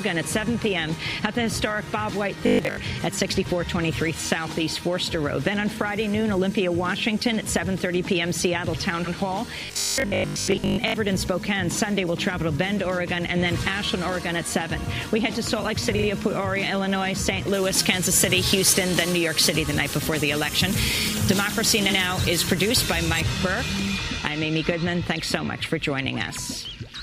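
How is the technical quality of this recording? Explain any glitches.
The recording has three kinds of technical fault: two stretches of robotic buzz, three short stutters and a passage with excessive treble.

Robotic sound from repeated short buffers appears at 2.47–2.77 s and again at 9.66–10.94 s. The sound turns into a rigid, metallic 50 Hz buzz that still loosely follows the material. The likely cause is audio arriving too seldom, so that a 20 ms chunk is looped to fill the gaps and most of the real audio is skipped. Unlike a stutter, the buzz is a steady fixed pitch rather than a distinct replay.

Repeated frames occur at 9.04–9.13 s, 15.96–16.04 s and 21.89–21.97 s. Each time, a fraction of a second plays again. At 9.04 s and 21.89 s a block of about 85 ms repeats once. At 15.96 s a block of about 43 ms plays twice more. Each repeat lengthens the audio by about 85 ms. These are audible replays rather than a buzz.

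Pre-emphasis left on affects 17.54–23.21 s. The treble boost fits the FM 75 µs curve, and the matching de-emphasis was never applied, so 10 kHz sits about 13 dB above 1 kHz. The result is thin, bright and sibilant. Unlike a general tonal imbalance, the boost rises steadily with frequency.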